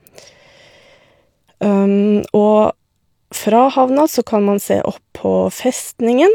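No technical faults can be heard anywhere in this speech recording. Nothing in the audio calls for a time mark or a description of what went wrong.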